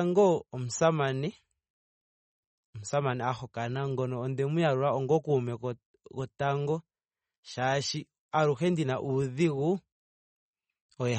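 Speech with plainly audible watery, swirly MP3 compression artefacts throughout, nothing above 8.4 kHz. That's likely a low-bitrate encode, fitting something around 32 kbps.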